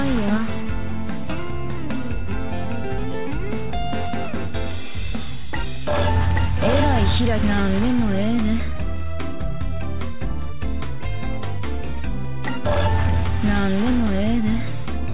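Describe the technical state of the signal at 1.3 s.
At 1.3 s the signal is intact, with no dropout, click or distortion, and like the rest of the call path it carries nothing above 4 kHz, which fits a narrowband G.711 telephone codec.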